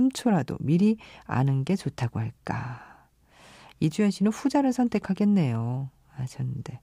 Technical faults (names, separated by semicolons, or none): none